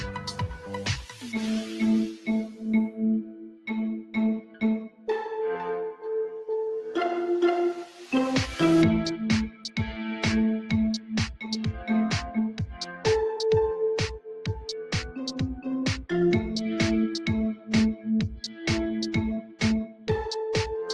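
A noise suppressor meant for speech runs on this sound throughout. It reads steady tones and decays as noise and turns them down. Level swings by about 10 dB, so held sound pumps and thins while attacks get through.

The suppressor cuts sound harder at six points. From 0.17 to 5.08 s, about two seconds in total sink, by up to about 12 dB. Shorter cuts follow at 9.49 to 9.77 s (about 11 dB), 10.62 to 11.47 s (about 10 dB), 12.51 to 13.05 s (about 9 dB), 17.56 to 18.58 s (about 9 dB) and 19.42 to 20.08 s (about 11 dB). Sustained parts drop away or end early.

The audio also passes through a call path with an Opus codec, and its top end stops at 12 kHz.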